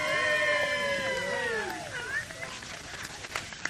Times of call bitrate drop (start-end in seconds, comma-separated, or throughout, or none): 2.50-3.70